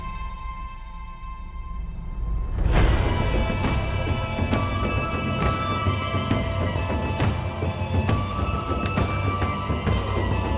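No technical faults turn up anywhere in the audio. Nothing breaks, drops out or distorts at any point.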